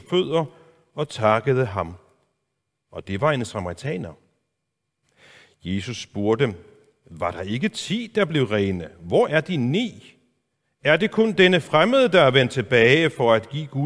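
No technical faults can be heard anywhere in the recording. Nothing in the speech calls for a timestamp or a closer look.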